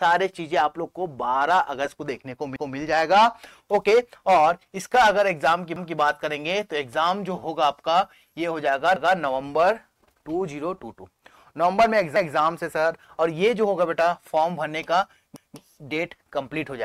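At 2.56, 5.76, 8.96, 12.16 and 15.36 s, overlapping chunks cause a stutter. Each 3-second block starts 200 ms before the previous one ended, so that slice plays twice. Waveform and spectrogram show a hard seam followed by an identical repeated 200 ms pattern.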